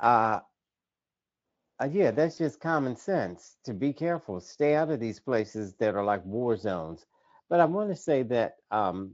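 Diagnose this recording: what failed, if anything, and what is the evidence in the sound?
Network-side VoIP packet loss concealed by the speech codec at 2.33–2.39 s, after "uh yeah": the Speex decoder papers over 40 ms with a fading, stretched sound.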